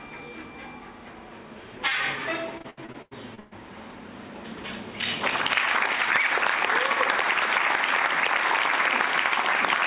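From 2.58 to 3.53 s there is repeated packet loss, heard as robotic sound. Eight gaps fall close together, the longest about 118 ms. Each hole is patched by stretching the sound just before it, so roughly 40 percent of that span is concealment. That gives a choppy texture rather than clean silences, which sets it apart from a single dropout. Throughout, nothing sounds above 4 kHz, which fits a narrowband call codec such as G.711.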